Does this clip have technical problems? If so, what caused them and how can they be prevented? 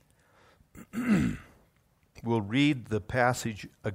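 No, there are no technical problems to point to in this speech clip. With nothing gone wrong, there is no cause to explain and nothing that needs preventing.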